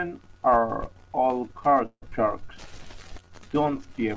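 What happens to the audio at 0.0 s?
Nothing goes wrong at 0.0 s: the speech starts intact, carried by the call path with its normal wideband limit of 8 kHz, which fits a G.722 codec at 64 kbps.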